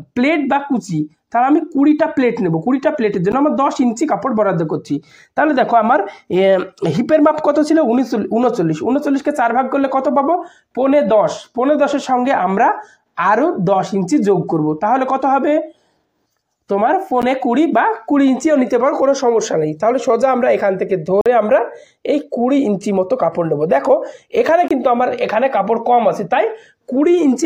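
The program likely failed to fill its output buffer in time, leaving blocks of digital silence at 3.32, 17.22, 21.21 to 21.26 and 24.68 to 24.71 s. The sound cuts abruptly to silence and back: two 12 ms ticks, then a 46 ms hole and a 23 ms gap, blocks of 512, 512, 2048 and 1024 samples.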